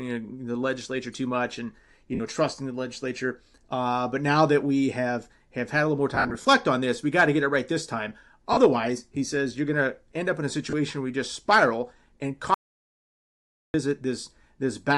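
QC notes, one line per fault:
Throughout: Bluetooth LC3 compression. The speech has a plainly audible grainy, breathy edge. Upper frequencies sound thinned and noise-filled, as the codec trades detail for bits. This likely comes from LC3 at around 48 kbps with 10 ms frames.
2.15–2.20 s, 6.15–6.47 s, 8.53–8.57 s, 10.70–10.74 s: lost LE Audio frames. Short gaps become a noisy smear as the decoder repeats the last spectrum with scrambled signs. The first comes after "too much and you". The 6.15 s stretch loses about 170 ms in bursts up to roughly 70 ms. The last falls just before "where you just spiral".
12.54–13.74 s: audio dropout to silence. After "you just spiral and", the sound cuts to dead digital silence for about 1.2 s, with no room tone. The input was likely lost while silence kept being written.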